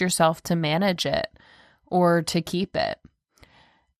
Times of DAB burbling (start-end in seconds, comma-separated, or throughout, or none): 0.88-1.01